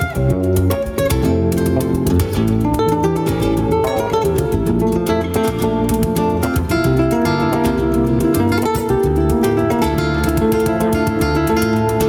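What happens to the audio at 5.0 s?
At 5.0 s the sound is affected by gain pumping, which runs through the whole clip. The level swings by around 10 dB. Loud and soft parts sit closer in level, and the sound is squashed. The likely cause is excessive input gain driving a fast limiter.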